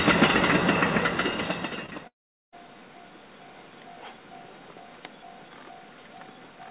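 Two bursts of short concealed packet loss land back to back, at 1.86 to 1.90 s and 1.90 to 1.93 s. Each time about 20 ms of audio failed to arrive and the decoder extended the preceding sound to fill the gap, leaving a brief smeared wobble.

A long network dropout is the likely cause of the break from 2.07 to 2.54 s. After a short buzzy continuation fades out, about 0.41 s of silence follows, and the audio resumes later with that stretch lost. Throughout, nothing sits above 4 kHz, which fits a G.711 A-law call codec.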